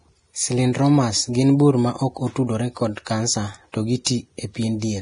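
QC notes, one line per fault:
throughout, Vorbis compression: hissy, grainy treble with nothing above 10.6 kHz, the heavy damage likely from low-bitrate Vorbis, fitting roughly 30 kbps.
3.72 s and 4.04–4.06 s, pre-echo: after "maok otudore kod kansa" and "otudore kod kansa to", hiss smears 16–20 ms ahead of attacks, as block quantisation noise spreads backward.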